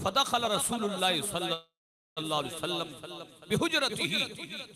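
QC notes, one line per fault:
1.53–2.19 s, call audio freeze: the last sound carries on briefly as a fading buzz or hiss, then about 470 ms of silence, and the audio resumes where it stopped with nothing lost and 632 ms added, likely from delayed packets draining the jitter buffer. A waveform shows a decaying tail then a flat gap. A spectrogram shows smeared, fading bands then a blank gap.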